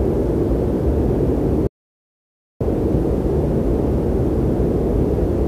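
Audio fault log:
1.67–2.61 s, playback stall: the sound cuts off mid-flow and the output stays completely silent for about 0.93 s before resuming. The likely cause is the playback buffer running dry, or the audio thread being blocked, until data delivery recovered.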